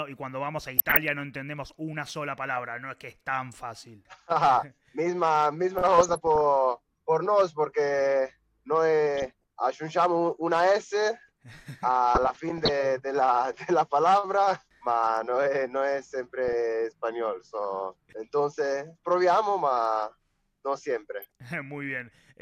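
DAB burbling occurs at 0.77 to 0.97 s, 5.76 to 6.46 s, 9.15 to 9.44 s, 12.15 to 12.69 s and 21.22 to 21.32 s. Short blips of noise appear in single sub-bands. This points to weak reception letting bit errors of a fraction of a percent corrupt MP2 samples and scale factors.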